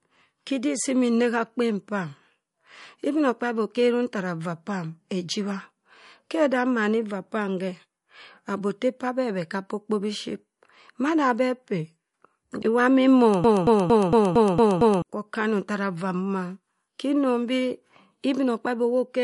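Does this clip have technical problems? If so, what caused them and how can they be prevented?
Yes. MP3 compression affects the whole clip. Nothing is present above 11.2 kHz, and the speech has a watery, swirly quality as weak frequency lines drop in and out between frames. The encoder cut treble and discarded detail because bits ran short, which fits a low bitrate around 48 kbps. Encoding at a higher bitrate, or keeping a lossless copy, prevents this.

A broken-record loop runs from 13.44 to 15.02 s, where a 0.23 s fragment repeats back to back seven times. The player or stream likely stalled and kept resending the last piece it held, so the audio due in that span is lost. Adequate buffering and a stable connection or decoder prevent such stalls.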